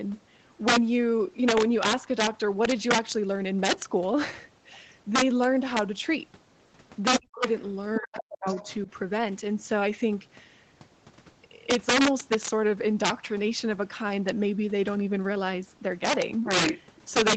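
Throughout the clip, the loudest peaks break into harsh, violent cracks, far sharper than ordinary clipping. This is integer overflow. The signal was driven about 9 dB past full scale, and on roughly one percent of samples the value ran beyond the largest integer. Instead of being held at the limit, it wrapped to the opposite sign. Each of those peaks jumps across the entire range, which produces the cracks.

From 7.18 to 7.46 s the speech drops away almost completely, a cut of around 40 dB. It dips again, just as deeply, from 8.00 to 8.46 s, and once more, much more lightly, at 8.63 to 8.67 s. This is speech suppressed in double talk. The likely cause is that both ends were talking at once, and the echo canceller could not separate the near talker from the loudspeaker echo. It turned everything down together.

Overlapping those dips, from 7.95 to 8.70 s, a second, fainter voice is audible underneath, roughly 15 dB below the main speech. 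This is the other side's voice leaking through. The far end was likely being played on a loudspeaker near the microphone, and the echo canceller did not strip all of it out, so a remnant of that voice passes into the recording.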